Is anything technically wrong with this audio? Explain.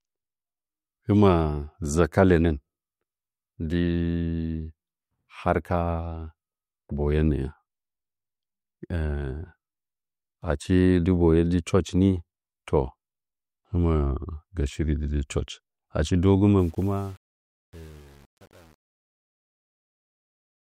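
Yes. From 16.58 s to the end at 20.69 s, just after "church achi dɨ", there is truncation distortion on a fade: the fade stage drops bits without dither, consistent with about 8-bit resolution. From 16.71 s onward, the fading speech turns gritty.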